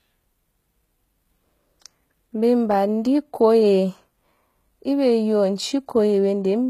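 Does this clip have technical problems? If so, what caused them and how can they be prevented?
Yes. Throughout the speech, sibilants sound gritty and lispy and the treble has a synthetic sheen, likely from HE-AAC compression at a low bitrate around 20 kbps. Rebuilt high bands don't match the real harmonics, and a spectrogram shows nothing above 14.9 kHz, with repetitive patches below that cutoff. Encoding at a higher bitrate with plain AAC or Opus would prevent it.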